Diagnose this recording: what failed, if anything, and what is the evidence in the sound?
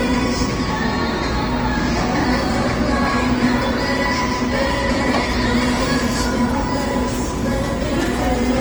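The fault sits at the codec stage, and it runs the whole length of the clip: it's most likely Opus compression, with damage you can plainly hear. Instead of swirly holes, tonal parts come out noisy, rough and grainy, which is the music (CELT) mode refilling starved bands with folded or noise content. Bandwidth stays full, extending to about 20.2 kHz, so the grain points to a tight budget, something like 24 kbps.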